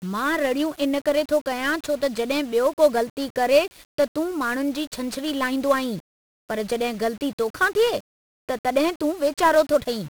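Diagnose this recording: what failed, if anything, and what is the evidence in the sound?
The failure is at the codec stage. The speech carries 1-bit DFPWM compression from start to finish. Every syllable sounds fuzzy and crackly. A dense hiss sits over the whole clip and buries the treble, so sibilants and consonant detail vanish into it. The damage is heavy. DFPWM keeps a single bit per sample, which nudges an adaptive level up or down. The coarse steps leave loud broadband quantisation noise, and the density fits about 48 kbps.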